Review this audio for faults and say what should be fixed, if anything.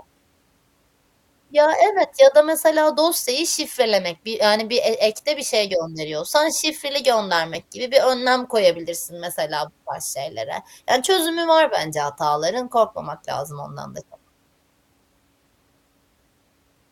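At 2.03 to 2.05 s, the speech jumps forward. About one compressed frame is lost, roughly 20 ms of audio. This is compressed frames skipped. The frame was either missing from the stream or rejected by the decoder as damaged, so playback resumed at the next good frame. Prevent it by checking file integrity after transfer and re-encoding or re-fetching from an intact source.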